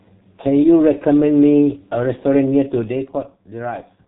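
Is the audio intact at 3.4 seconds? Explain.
No: G.723.1 codec damage runs throughout, including 3.4 s. It passes nothing above 3.8 kHz and updates its frame-based voice model slowly, leaving the speech muffled and hoarse with smeared consonants.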